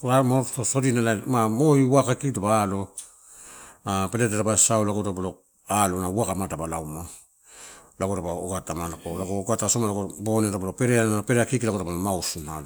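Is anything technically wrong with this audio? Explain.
No, nothing technically wrong can be heard in this speech recording. There is no moment in the clip where a fault shows itself.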